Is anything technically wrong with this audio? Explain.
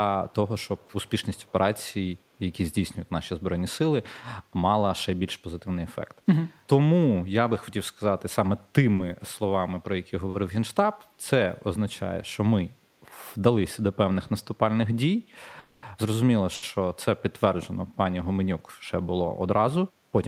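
Yes, there are several faults.

Echo leak, from 0.3 to 0.35 s and 0.59 to 1.52 s: a faint delayed copy of the speech, about 344 ms late and roughly 35 dB below it, trails the original. The likely cause is a far-end loudspeaker whose echo canceller let part of the microphone pickup return.

Short stall from a late packet, at 8.95 to 9.01 s, 10.30 to 10.36 s and 16.55 to 16.66 s: a packet arrived late, the jitter buffer emptied, and the receiver stretched the last sound by 30, 30 and 80 ms respectively, so a sound is held too long, then resumes without loss.

Call audio freeze, from 15.60 to 15.86 s: the sound hangs for about 230 ms as a fading continuation of the last sound, never reaching silence. The likely cause is packets delayed in transit, emptying the jitter buffer, after which playback continues from where it stopped with nothing missing.

Jitter buffer speed-up, from 19.15 to 19.73 s: with excess audio buffered, the receiver cut short pitch-period pieces, about 70 ms in total, so the speech runs at 110% speed, sounding hurried but at unchanged pitch.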